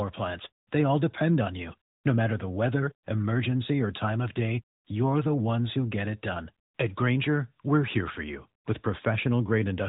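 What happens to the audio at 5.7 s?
At 5.7 s the speech runs on intact, with no dropout, click or other fault at that moment.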